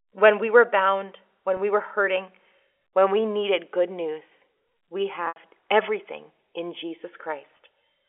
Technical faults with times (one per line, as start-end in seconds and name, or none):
1.57-1.59 packet loss with pitch repetition
5.26-5.36 packet loss with pitch repetition
7.57-7.59 packet loss with pitch repetition